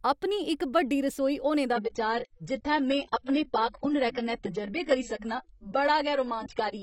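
An adaptive stream at a lower bitrate takes over at 1.73 s, after "इक बड्डी रसोई होने", and runs to the end. The player switched to a leaner version as the connection slowed. With no gap, treble stops at 8.2 kHz and artefacts thicken, fitting about 16 kbit/s AAC.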